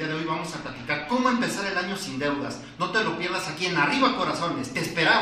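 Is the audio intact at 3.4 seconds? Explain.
Yes, at 3.4 seconds the audio is intact, with no dropout, glitch or other fault at that moment.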